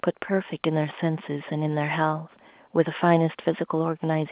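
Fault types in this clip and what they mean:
No faults found; the speech is carried over A-law G.711 telephone coding at 8 kHz sampling, so its band stops at 4 kHz as that format requires.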